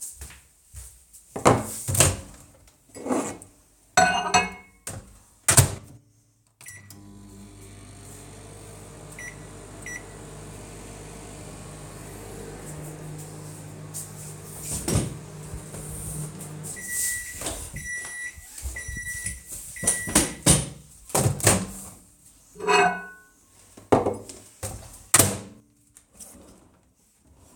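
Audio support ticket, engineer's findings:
Listened through the full recording and nothing in the sound stood out as needing attention.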